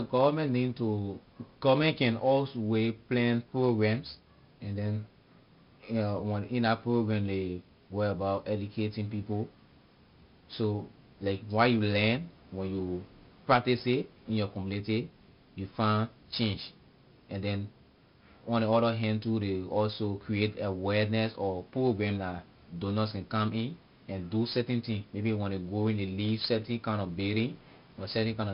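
From start to finish, the speech carries heavy 4-bit ADPCM compression. Each sample is coded as a coarse 4-bit step from a predicted value, and the step size adapts as it goes. The error rides along with the level. Every loud syllable gets a gritty hiss, and sharp onsets distort where the step cannot grow fast enough. Nothing sounds above about 5.3 kHz, so the top is dull. That points to a stream near 44 kbps at a low sample rate.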